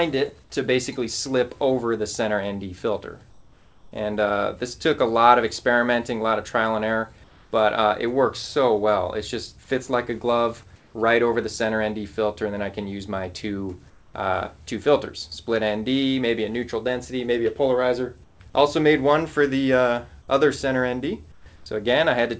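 Comfort noise in place of the background appears at 3.30–3.92 s, 7.24–7.52, 10.76–10.94, 13.90–14.14, 18.24–18.40, 21.32–21.46 and 21.56–21.66 s. In each pause the real background, already about 30 dB below the loud passages, gives way to a smooth, featureless hiss, quieter by about 7, 2, 4, 5, 5, 11 and 5 dB respectively. The likely cause is discontinuous transmission: the sender goes silent when its detector hears no speech, and the receiver fills the gap with synthetic noise. On a spectrogram each gap shows as a uniform, texture-free band, paler, with hard edges where the real background resumes. On the waveform the noise floor steps down and back up. Nothing appears above 8 kHz in any of it, which points to a G.722-style wideband call path.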